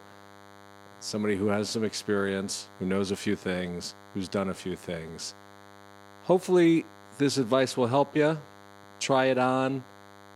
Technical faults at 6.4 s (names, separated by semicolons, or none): DECT cordless phone buzz